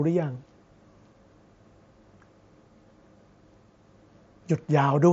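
Nothing here needs flagging: the speech comes over a Bluetooth mSBC headset link, and no technical faults turn up anywhere in the clip.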